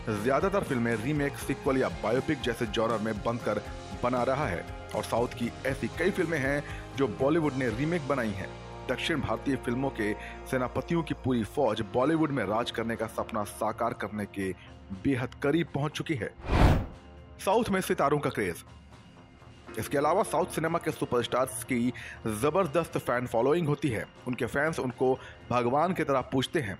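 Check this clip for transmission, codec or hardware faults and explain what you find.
Nothing stood out on listening to this clip.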